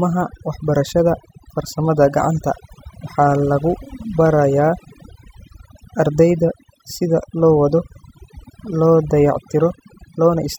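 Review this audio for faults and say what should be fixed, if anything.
Overdone noise removal runs throughout: bands near the noise estimate are cut hard, leaving a lowered, twinkling background. Set the noise reduction gentler to prevent it.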